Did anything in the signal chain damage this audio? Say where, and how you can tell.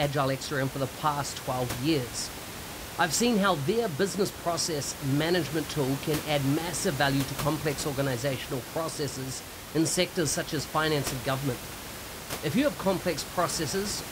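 No, the signal chain shows no damage here.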